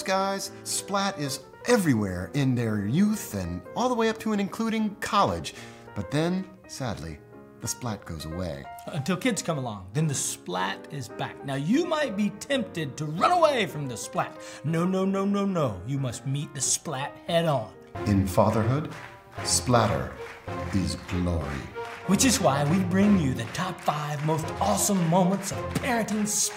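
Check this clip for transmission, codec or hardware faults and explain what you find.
Nothing stood out on listening to this clip.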